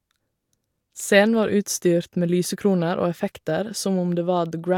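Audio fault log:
No faults are heard in this speech recording. There is nothing to log for any point in the clip.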